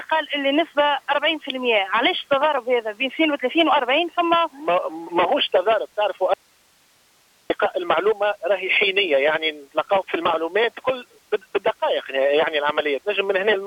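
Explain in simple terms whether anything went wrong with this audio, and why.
At 6.34 s the sound suddenly cuts out, leaving only a faint hiss until it snaps back at 7.5 s, a gap of about 1.2 seconds. This is an audio dropout to a faint residue, likely from a brief loss of the signal while the equipment after the break stayed switched on.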